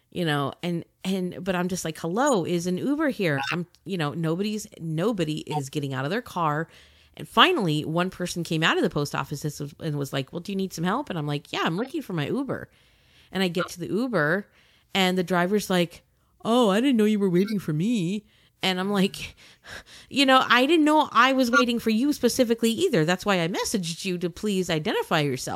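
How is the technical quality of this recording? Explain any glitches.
The recording has repeated short glitches. Corrupt frames were decoded at 2.27, 3.38, 5.51, 11.78, 13.59, 17.43, 21.53 and 22.66 s. Damaged compressed data was played as if valid, so energy lands at wrong frequencies. Each sounds like a brief chirp or noise burst. The loudest is near 21.5 s.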